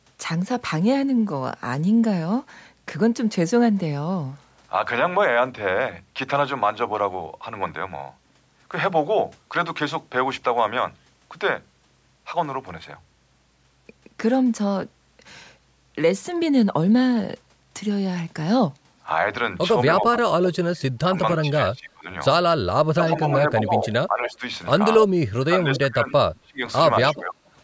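From 19.99 to 22.08 s the speech sinks and breaks up, with the deepest dips around 25 dB and about a second and a half of the stretch affected. It sinks again, more gently (around 10 dB), from 22.95 to 24.42 s, and then hard once more from 25.38 to 27.37 s. This is speech suppressed in double talk: both ends were likely talking at once, and the echo canceller, unable to tell this talker from the returning loudspeaker sound, turned everything down.

Overlapping the later dips, a delayed copy of the voice trails the original by about 0.27 s. It appears from 23.83 to 24.31 s, roughly 10 dB below the speech, and from 25.75 to 27.21 s, about 15 dB below. This echo leak likely comes from a speakerphone whose canceller let part of what its microphone caught slip back into the call.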